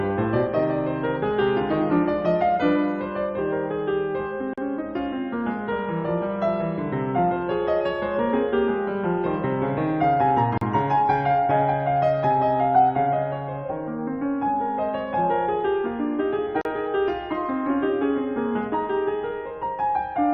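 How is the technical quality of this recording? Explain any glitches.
Three brief dropouts cut into the music, all the same glitch. At 4.54, 10.58 and 16.61 s, every 6 s, there's a gap at a join of encoded pieces: 37 to 42 ms of silence with softly smeared edges, from untrimmed encoder delay and end padding, then the music resumes right where it stopped.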